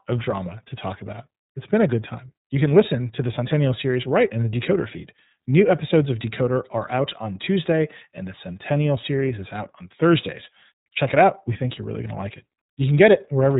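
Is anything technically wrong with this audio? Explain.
Yes. Throughout the clip the speech carries the sound of the iLBC codec, and the damage is plainly audible. Everything above about 3.8 kHz is gone, leaving a narrowband, telephone-like tone. The codec models each 30 ms frame's excitation on its own, not predicting from the previous frame, and the rate fits roughly 13.3 kbps. That coarse, frame-by-frame coding makes the speech sound rough and somewhat synthetic while staying intelligible.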